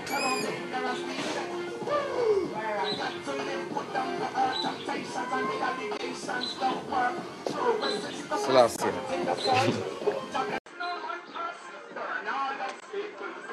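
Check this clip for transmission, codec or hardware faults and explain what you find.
There are two kinds of fault: three short Bluetooth dropouts and a switch of input to a poorer device.

The Bluetooth dropouts fall at 5.97 s, 8.76 s and 12.80 s. Each is a brief hole in the sound, lasting from about 33 to 57 ms. Afterwards the sound carries on as if it had kept playing. Each hole fits a single lost packet of about 15 ms. The likely cause is packets reaching the headphones too late to be played.

The input switched to a poorer device at 10.58 s and stays that way to the end. An 80 ms silence marks the switch. After it, the sound is duller, with nothing above 8.6 kHz. It is roughly 10 dB quieter. A new background noise appears, well below the signal. This is likely a change to another microphone or a headset's call profile, which passes a narrower band.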